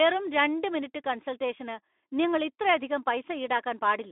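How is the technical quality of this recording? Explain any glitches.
No glitches stand out here; the speech comes through steady and intact, with nothing that jumps out as a technical problem.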